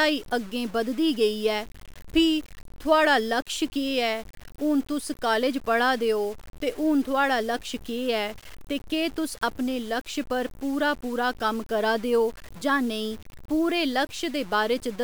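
Across the whole speech clip there is grainy, gritty distortion that rides on the signal itself, sitting only about 25 dB below it. The likely cause is low bit depth without dither: samples were truncated to a coarse grid, which fits roughly 6 bits, so the rounding error tracks the waveform. Unlike steady hiss, this grit comes and goes with the sound, thickening on quiet tails, and quiet passages sputter or drop to silence.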